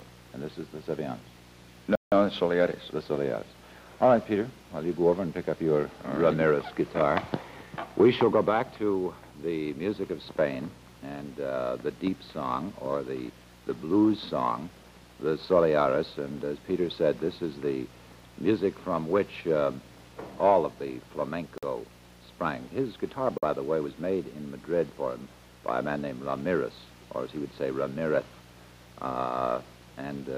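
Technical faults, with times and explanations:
1.95 to 2.12 s, 21.58 to 21.63 s and 23.38 to 23.43 s, Bluetooth stall: the audio drops to silence for 166 ms, then 49 ms and 47 ms, and resumes. The likely cause is radio interference delaying packets, so the headphone buffer ran empty and playback waited for retransmissions. Unlike a regular buffer underrun at a fixed interval, these gaps are irregularly spaced and vary in length, as bursts of interference would produce.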